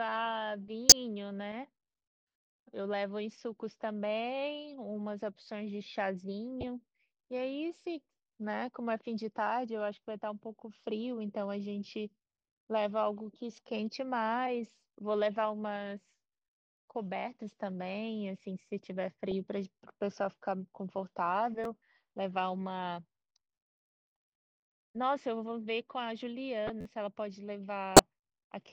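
A corrupt frame decoded at 0.89–0.93 s, 6.61–6.67 s and 19.31 s gives short squeaky blips; damaged frames put energy at wrong frequencies, showing as brief misplaced spectrogram smears. A repeated buffer at 21.64 s plays one 11.6 ms chunk twice, which fits a 512-sample buffer, and is heard as a click with an identical waveform segment butted hard against itself. Another corrupt-frame blip follows at 26.67–26.70 s. A longer repeated buffer at 26.81–26.85 s loops the same chunk four extra times, giving a brief buzz that appears as periodic vertical stripes. A final corrupt frame decoded at 27.96–27.99 s gives another chirp.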